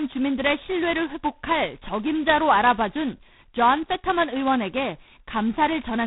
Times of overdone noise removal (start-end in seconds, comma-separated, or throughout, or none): none